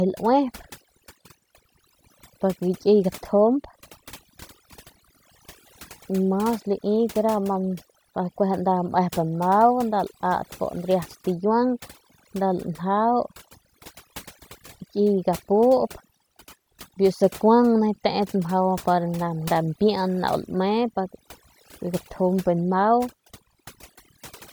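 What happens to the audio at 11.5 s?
At 11.5 s the overdone noise removal heard throughout the clip is present. Aggressive noise reduction cuts quiet bands. The background twinkles.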